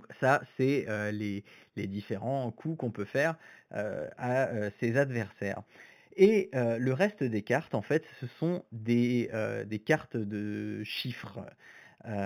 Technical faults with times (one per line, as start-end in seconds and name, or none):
0.00-12.26 imaging from linear upsampling